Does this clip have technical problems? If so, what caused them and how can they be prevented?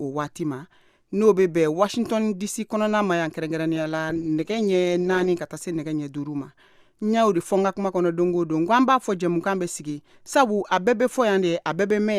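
Yes. Between 3.76 s and 5.35 s there is a call bitrate drop. For about 1.5 s the audio turns rough and muffled, because the bandwidth estimate fell and the encoder was forced to code with far fewer bits. The sound points to a fall from around 64 kbps to roughly 14 kbps, low enough that the high frequencies are cut away. On a spectrogram the upper band goes dark across that stretch and the remaining energy looks blocky and smeared, while the waveform keeps its overall level. To prevent it, give the call a stable network path with spare bandwidth, and set a sensible minimum bitrate so the encoder cannot collapse this far.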